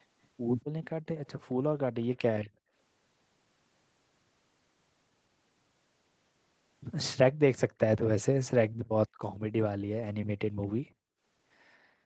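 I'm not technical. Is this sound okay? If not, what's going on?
No, it isn't quite right. There are two problems.

The first is an echo leak. From 0.61 to 2.5 seconds, a faint second copy of the speech trails the original by about a quarter of a second. The other person was likely using a loudspeaker. Their microphone picked up the call playing aloud, and their echo canceller didn't remove all of it. That leftover was sent back, so you hear the speech repeated softly, just behind itself.

The second is background gated by the echo canceller. The quiet room sound behind the speech suddenly drops away almost to silence, then comes back. This happens between 0.92 and 2.73 seconds, again from 8.69 to 9.2 seconds, and once more from 10.59 seconds to the end. While sound was playing through the loudspeaker, the echo canceller turned the microphone right down. The room sound returns only when it lets go.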